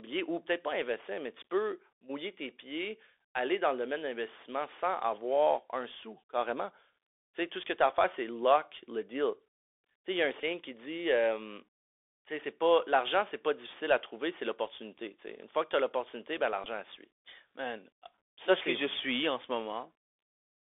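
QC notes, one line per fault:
Throughout: Bluetooth CVSD headset codec. The speech is thin and boxed-in, with nothing below about 300 Hz or above 3.5 kHz. A grainy hiss sits under it, s sounds come out scratchy, and loud bright passages crunch. A one-bit delta coder, fitting 64 kbps, is stepping too slowly to track fast changes.
10.41–10.43 s and 16.64–16.67 s: Bluetooth headset packet repeated. Each is a brief buzzy burst near 267 Hz. At 10.41 s about 18.8 ms was lost, fitting five 3.75 ms packets. At 16.64 s about 11.2 ms was lost, fitting three. The decoder replayed the last good packet to fill each gap.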